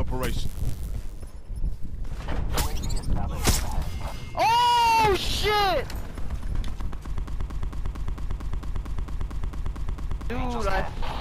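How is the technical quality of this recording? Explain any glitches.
The recording has one clear glitch, a broken-record loop from 7.28 to 10.30 s. A stall likely left the player resending its last fragment. A 0.23 s slice repeats 13 times back to back, replacing three seconds of audio.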